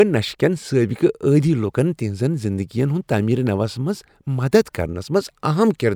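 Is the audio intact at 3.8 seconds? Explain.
Yes, at 3.8 seconds the audio runs intact, with no dropout, click, distortion or other fault to be heard at that point.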